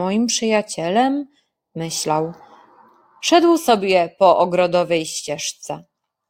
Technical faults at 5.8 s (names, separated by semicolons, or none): none